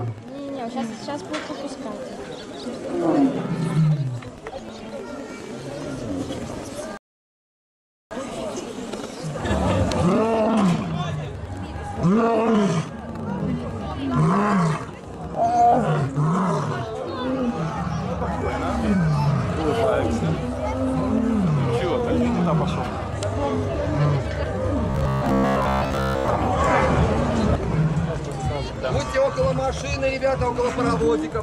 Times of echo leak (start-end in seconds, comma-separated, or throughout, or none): none